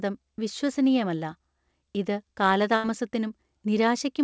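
At 2.76 s the speech freezes into a fading, held sound, then skips ahead: a burst of packet loss, bridged by stretching the last audio.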